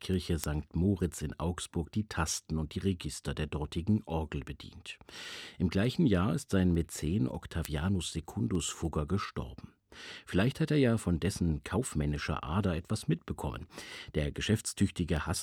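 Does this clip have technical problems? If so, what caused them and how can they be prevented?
Yes. Word clock ticks run through the speech from 0.14 s to 15.17 s, about every 0.3 s, roughly 50 in all. An unsynchronised receiver, off by around 70 ppm, drops or repeats one sample per slip; unlike buffer dropouts, nothing goes silent. Lock the receiver to the sender's clock.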